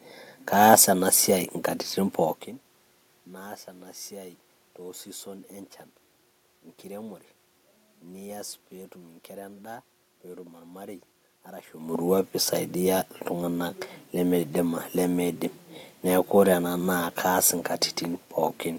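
Nothing's gone wrong technically here; the room background and the level changes a couple of seconds in and again around 11 seconds, when the talker seems to shift relative to the microphone, are just part of how the speech was captured.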